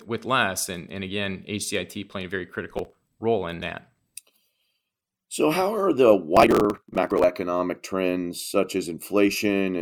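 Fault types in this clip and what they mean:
Processor overload crackle: The processor kept missing its deadlines for short audio buffers, around 10 ms each. Each missed buffer was skipped, leaving a hard-edged gap. The result is gritty crackle after "playing a very" and again, much longer, after "how are the".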